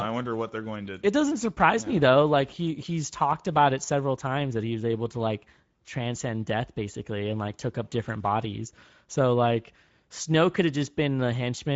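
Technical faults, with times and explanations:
Throughout, Speex codec: speech sounds hoarse and noisy, because this CELP coder lacks excitation bits, which fits a bitrate near 17 kbps.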